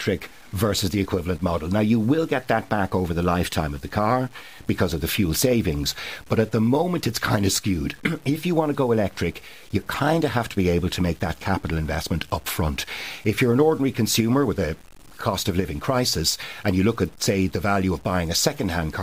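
Low bit depth without dither runs through the whole of this speech clip, from start to finish. The voice carries a grainy, rasping distortion that tracks its loudness, roughly 30 dB below the signal, and quiet syllables and word tails turn gritty or sputter toward silence. Because the error follows the signal rather than sitting as steady hiss, the likely cause is truncation to very few bits with no dither applied, which fits a 7-bit signal.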